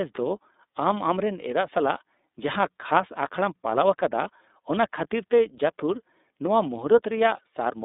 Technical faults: iLBC codec

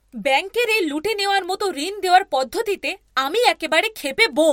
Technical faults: word clock ticks

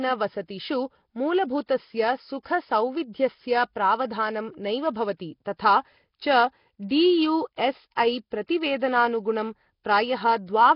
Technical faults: Nellymoser compression; pre-echo

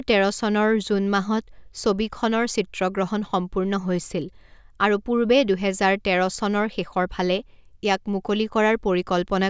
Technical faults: none

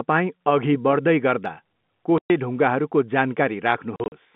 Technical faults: packet loss filled with silence

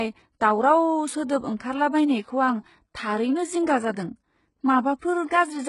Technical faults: HE-AAC compression

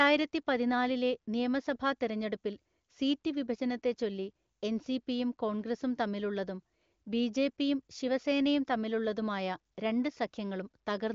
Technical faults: none

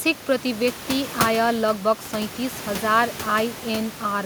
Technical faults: none

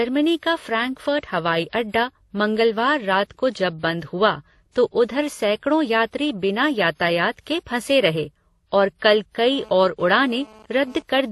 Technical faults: transcoding between lossy codecs; GSM phone buzz

